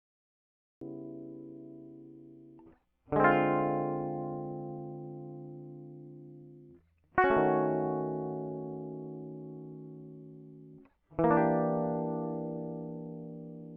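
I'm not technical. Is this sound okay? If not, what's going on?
No. This music clip has a cut-off start: the first 0.81 s is dead silence, and then the music jumps in abruptly at 0.81 s, already mid-sound. The recording began late, so the natural beginning of that sound is missing.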